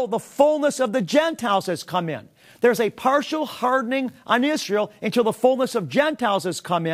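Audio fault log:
No audible faults detected.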